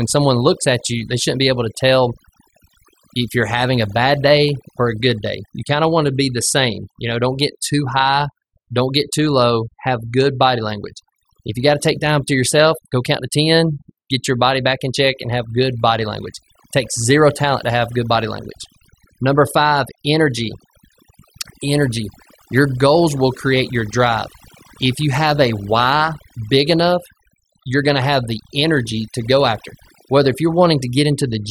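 Overdone noise removal runs throughout the speech: an over-aggressive noise reducer cuts bands near its noise estimate, leaving twinkling specks in near-silence.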